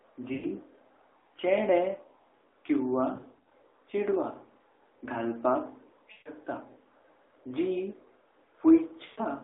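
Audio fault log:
0.34–0.47 s, 3.16–3.52 s, 6.12–6.29 s, 9.06–9.21 s: lost AMR speech frames. The decoder repeats the last good pitch and vocal tract settings while lowering the gain, so speech smears and fades rather than cutting off cleanly as a dropout would. At 3.16–3.52 s the smearing is short and scattered, the longest burst about 40 ms.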